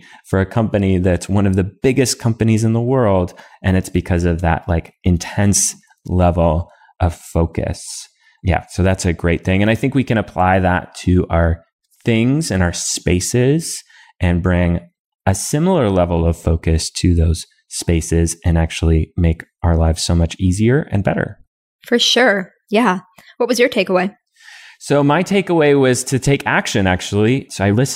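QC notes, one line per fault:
No fault to note in this speech clip.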